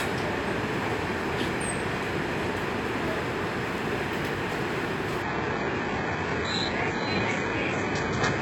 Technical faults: adaptive stream at a lower bitrate

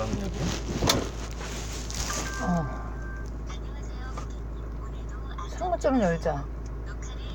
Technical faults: none

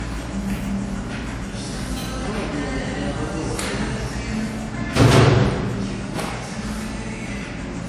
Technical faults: low-bitrate audio saved at a high bitrate

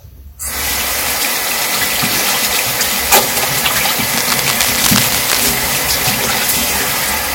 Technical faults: cable scratch noise

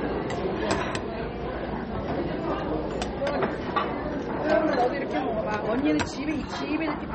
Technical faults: MP3 compression

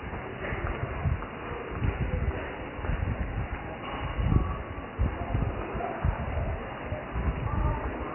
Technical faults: MP3 compression

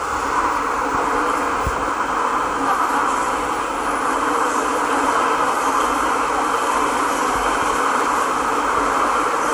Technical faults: generation loss

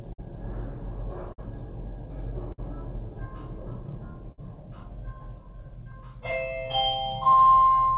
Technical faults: clock drift between sender and receiver; repeated timing corrections; short stall from a late packet; scattered short gaps

